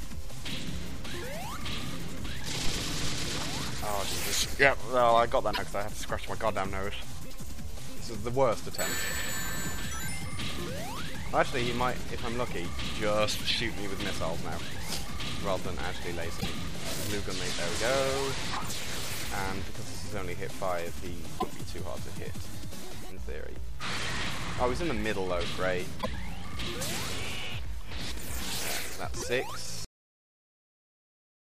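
Brief glitches of about 70–80 ms each break in at 5.5, 16.37, 21.36, 25.98 and 29.17 s: damaged data in the compressed stream, where the decoder misreads corrupt frames and must resynchronise. At 29.85 s the sound stops dead into digital silence with no decay, a cut-off end where the final buffers never reached the output.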